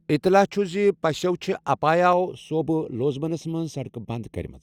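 From 2.13 s to the end at 4.62 s, the speech turns hollow and phasey from channel delay (comb filtering). One channel lags by roughly a third of a millisecond before the mono sum, cancelling near 1.5 kHz and at regular steps above it. A spectrogram shows fixed horizontal notch bands.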